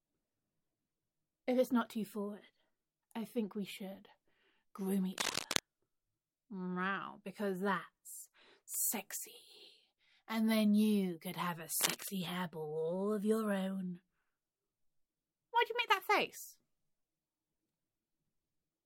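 At 5.13 to 5.59 s and again at 11.81 to 12.11 s there's cable scratch noise, rough bursts of crackly rustle, first about as loud as the sound itself, then a bit quieter. Likely a worn connector or lead being jostled, its contact flickering.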